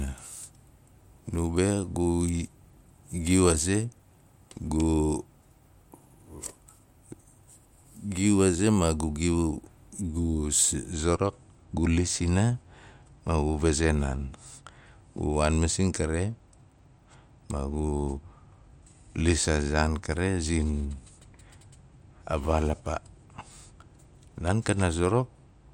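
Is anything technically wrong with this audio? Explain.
Yes. From 10.93 s to the end there is channel delay (comb filtering). One channel runs late by roughly two samples, around 0.04 ms, before both are summed to mono. Shared content cancels near 10 kHz, so the speech loses some top-end brightness.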